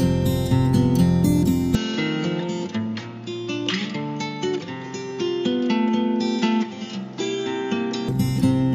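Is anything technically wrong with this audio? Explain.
Yes. Input switched to a poorer device, 1.75 to 8.09 s: the sound likely shifts to a narrower-band microphone, losing everything above 7.2 kHz. It turns dull and roughly 10 dB quieter, with new background noise about 30 dB down. There is no gap at the switch, and it clears at 8.09 s.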